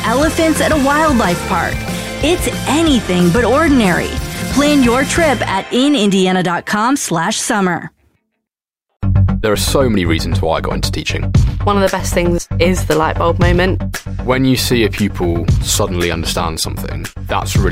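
Nothing technically wrong can be heard anywhere in this audio. It carries no audible fault at any point and needs no correction.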